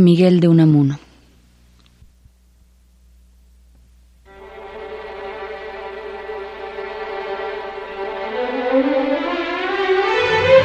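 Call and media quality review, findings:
No call or media quality findings to report for this clip.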